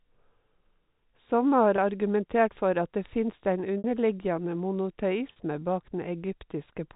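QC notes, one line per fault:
1.76–1.78 s, 3.78–3.84 s, 5.32–5.36 s: packet loss with pitch repetition. The gaps are 20, 60 and 40 ms long, consistent with 20 ms packets. The receiver loops the last pitch period, so the shortest gap sounds like a brief buzzy hold. The 60 ms gap fades almost to silence before cross-fading back. On a spectrogram, each gap shows flat, unchanging harmonic stripes below the 4 kHz G.711 ceiling. The waveform shows identical repeated cycles shrinking in amplitude.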